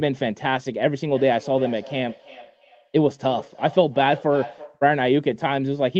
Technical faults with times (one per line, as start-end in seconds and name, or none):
1.13-4.85 feedback echo between two devices